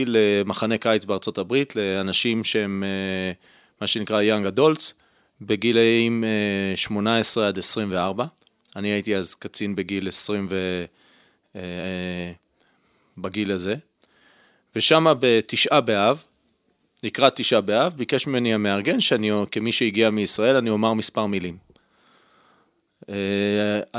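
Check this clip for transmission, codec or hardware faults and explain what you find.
Nothing audible points to a transmission, codec or hardware problem in this speech recording.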